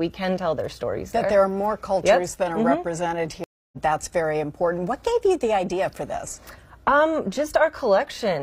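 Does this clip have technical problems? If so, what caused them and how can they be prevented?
Yes: at 3.44–3.78 s the sound drops out for 0.28 s, then resumes roughly 0.3 s further on, a stream reconnect where the player rejoined mid-stream with a fresh decoder. A larger playback buffer and automatic resume from the exact position prevent this.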